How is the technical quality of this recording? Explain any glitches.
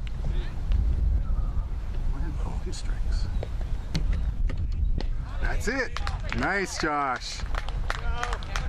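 The recording has four audible dropouts where the audio lurches forward.

Compressed frames skipped occurs at 2.63 s, 4.97 s, 5.99 to 6.01 s, and 7.41 s. Whole frames of the coded stream were either lost or rejected as corrupt by the decoder, so playback leaps ahead in steps of about 23.2 ms. The jumps are roughly a tenth of a second, three tenths, a fifth, and half a second.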